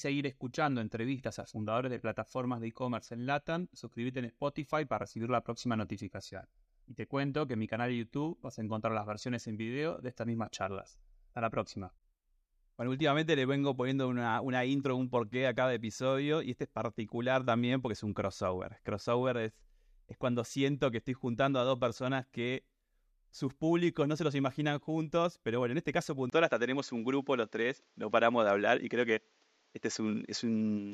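Speech that abruptly turns duller and boxier at 26.30 s, after a brief 20 ms gap, staying that way to the end. Content above 7.6 kHz vanishes, the level shifts by about 5 dB, and faint new background noise appears. The likely cause is the input switched to a poorer device.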